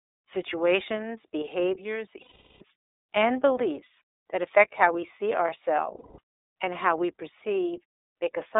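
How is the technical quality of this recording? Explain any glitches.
Technical quality is limited by narrowband coding, with two short dropouts. Throughout, the iLBC codec damage is plainly audible: audio is confined to about 300 Hz to 3.7 kHz, sounding thin, rough and synthetic, consistent with 30 ms frames at 13.33 kbps. Lost iLBC frames occur at 2.22–2.62 s (about 390 ms) and 5.97–6.19 s (about 210 ms). The decoder repeats the last pitch cycle mixed with noise, giving a held, buzzy vowel before clean recovery.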